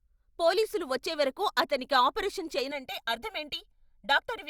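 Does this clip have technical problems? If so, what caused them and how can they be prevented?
Yes. Right after "పోలీసులు వచ్చేవరకు అతనికి ఆపరేషను", at about 2.71 s, the speech turns hollow and phasey and stays that way to the end. That's channel delay, or comb filtering. One channel is running roughly a millisecond and a half behind the other, and when they're folded to mono the shared content cancels at evenly spaced frequencies, starting somewhere around 400 Hz. To prevent it, check channel alignment and polarity before any mono fold-down, and keep both channels on the same clock and buffer path.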